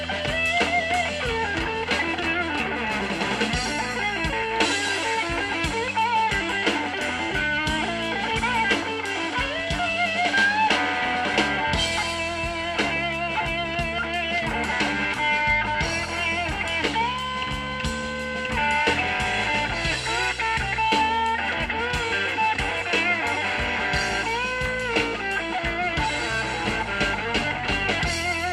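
No technical faults are present anywhere in the recording.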